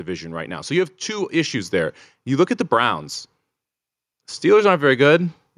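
Automatic gain rising from 0.05 to 3.08 s in this speech recording: the gain control judged the input too quiet and raised it by about 5 dB, swelling voice and background together.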